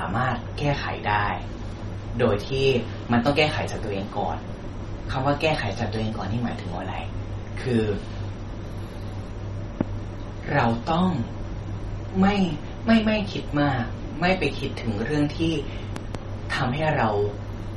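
MP3 compression runs through this speech recording: nothing is heard above 11.7 kHz, and the watery, swirling artefacts point to a low bitrate, likely around 32 kbps, with weak frequency lines dropping in and out. A loud pop strikes at 9.81 to 9.83 s and a double loud pop at 15.96 to 16.17 s, each about 15 dB above the speech, likely voltage steps from a plug, switch or static discharge added on top of the continuing sound.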